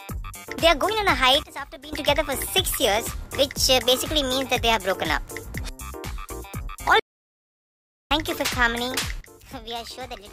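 At 1.43 s the level falls by about 15 dB in a single step and returns at 1.93 s. This is a sudden gain jump, likely from a digital gain setting applied without a ramp. The background noise drops and recovers together with the sound, and the change is instantaneous rather than a gradual fade. That is what separates it from a dynamics processor easing the level down. A second sudden gain jump at 9.21 s cuts the level by about 12 dB and stays low until the clip ends. Its likely cause is again an unramped gain change.

From 6.99 s to 8.11 s the output goes completely silent for about 1.1 s. This is a playback stall, likely from the player running out of buffered data or its thread being blocked. Unlike the gain drops, nothing remains underneath: the noise floor disappears as well. When the sound returns, it carries on at full level rather than at a reduced one.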